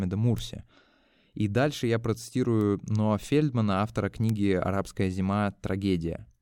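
Speech with three bit error spikes, sharp isolated ticks at 0.38, 2.61 and 4.29 s, peaking around -15, -21 and -15 dBFS. Each is a flipped bit throwing one sample (two at 4.29 s) way off and straight back, so it's broadband and unrelated to the speech.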